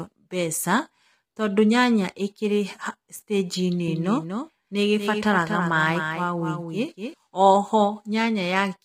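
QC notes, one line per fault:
Throughout: low-delay AAC compression. The speech sounds rough and grainy, with noise between harmonics and a thin top band, likely from heavy coding near 24 kbps.
3.88–7.14 s: doubled audio track. A full-band copy trails by roughly 200 ms, somewhat quieter, likely from a second capture path, starting and stopping abruptly.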